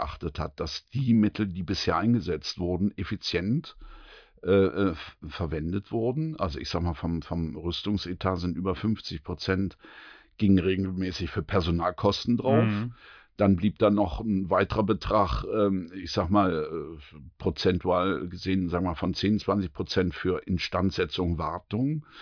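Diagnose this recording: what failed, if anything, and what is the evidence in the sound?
Nothing in the recording stood out as a failure on listening, and no moment in the sound points to a fault at any stage.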